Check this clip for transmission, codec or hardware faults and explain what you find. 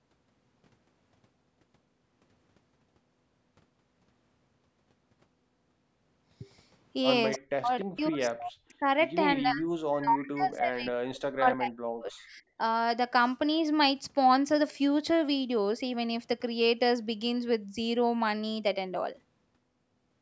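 Two fault types show up in the speech, both clustered between 7.3 and 12.6 s, and both point to a hands-free call path.

Echo leak, at 7.33 to 7.38 s and again at 7.80 to 7.85 s. A loudspeaker on the far end was likely feeding its microphone, and the echo canceller let part of it through. What returns is a brief, faint copy of the speech delayed by 293 ms, about 15 dB below the talker in the first scrap and about 20 dB below in the second, heard as short ghostly fragments.

Speech suppressed in double talk, at 7.38 to 7.73 s, 7.93 to 8.86 s and 9.42 to 12.59 s. With both sides likely talking at once, the echo canceller could not tell the local voice from loudspeaker echo and attenuated everything, by around 40 dB at its deepest. The talker drops away in pieces, briefly at first and then for roughly three seconds in the last stretch, coming and going rather than fading smoothly. The absence of content above 8 kHz comes from the call's microphone processing and is normal.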